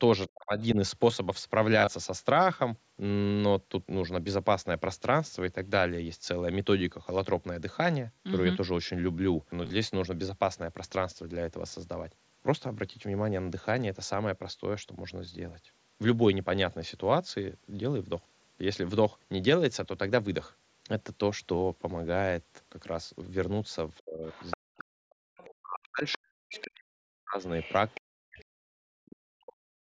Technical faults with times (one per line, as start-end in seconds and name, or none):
0.26-0.65 other side's voice leaking through
0.28-0.78 speech suppressed in double talk
1.80-1.87 concealed Bluetooth headset packet loss
8.13-8.18 concealed Bluetooth headset packet loss
9.64-9.70 concealed Bluetooth headset packet loss
23.96-24.84 other side's voice leaking through
24.01-27.43 speech suppressed in double talk
25.37-26.64 other side's voice leaking through
27.61-28.45 other side's voice leaking through
28.01-29.85 speech suppressed in double talk
29.07-29.13 other side's voice leaking through